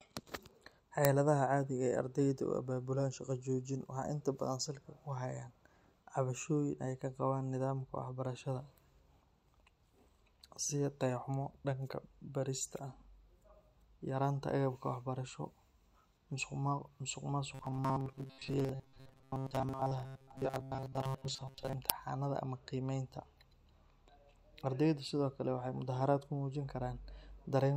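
At 1.05 s there is an uninitialised buffer. A tiny block of about 0.67 ms was played before real audio filled it. Leftover memory came out as samples. It sounds like a sharp, loud digital click, which fits a 32-sample buffer.

From 17.55 to 21.78 s the speech turns into a rigid, metallic buzz at 133 Hz. This is likely robotic sound from repeated short buffers. Each repeat lasts about 7.5 ms. Most of the real audio is skipped, yet the buzz loosely tracks the speech.

At 21.90 s the uninitialised buffer fault returns, just before "ama qiimeynta". It is the same brief burst of garbage samples, about 0.67 ms long.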